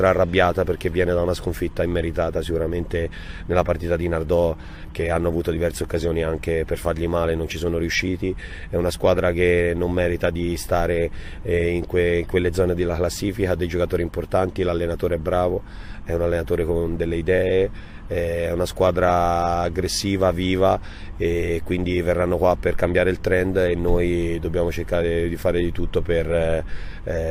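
No technical faults can be heard in the clip, so there is nothing to describe in time order.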